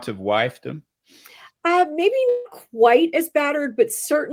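At 2.29 s the sound dissolves into a fading buzz, likely a long network dropout; unlike a brief glitch, 160 ms vanishes before "quite as".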